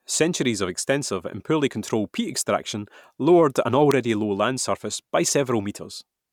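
A speech recording with one electrical switching spike at 3.91 s. It is a brief, sharp burst, peaking near -10 dBFS, sitting on top of the speech. The cause is likely a nearby switch or motor arcing, with the audio line picking up the burst.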